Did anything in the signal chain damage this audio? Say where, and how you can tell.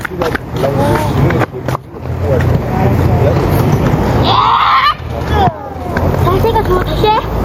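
Yes. Gain pumping runs through the whole clip, with the gain swinging by around 20 dB. The likely cause is input gain set far too high, with a fast limiter clamping every peak.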